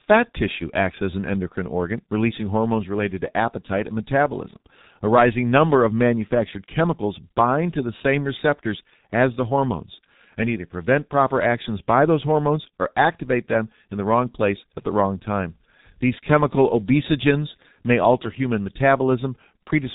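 G.723.1 codec damage runs through the whole speech clip: nothing reaches above 3.8 kHz, so consonants blur and the voice turns muffled and hoarse. The heavy coarseness fits a bitrate near 6.3 kbit/s, with the voice model refreshed only every 30 ms frame.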